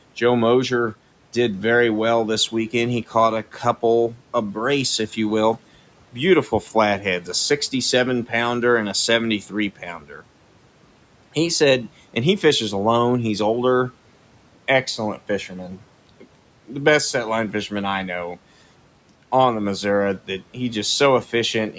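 Speech cut by the noise suppressor occurs from 9.99 to 10.22 s. The suppressor misjudged this stretch of the speech as background noise and pulled its level down along with the room noise, which sits about 25 dB below the speech. The deepest dip reaches about 10 dB, and roughly a fifth of a second is affected. Those sounds come across swallowed and faint, briefly thinning the speech before full level returns.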